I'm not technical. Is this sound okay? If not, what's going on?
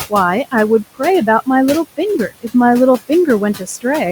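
No. All the way through, the background noise dips away between phrases and creeps back in underneath the speech. These are noise suppressor artifacts: a cleanup filter keeps turning down whatever it judges to be steady room noise, moment by moment.

From about 3.57 to 3.85 s, a small bit of the speech, about a tenth of a second in total, sounds swallowed or faint. This is speech cut by the noise suppressor: the filter mistook that soft part for background and turned it down too.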